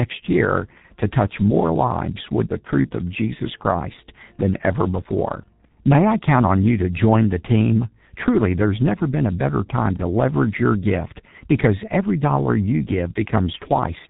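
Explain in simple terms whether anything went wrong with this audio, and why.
Yes, something went wrong. The speech passed through the G.723.1 codec, an old internet-telephony format that squeezes sound into a tiny data stream. It cuts everything above about 3.8 kHz and rebuilds the voice from a rough model that updates only every few hundredths of a second. The damage is heavy and lasts the whole 14 seconds, so the speech sounds muffled and hoarse, with consonants smeared together.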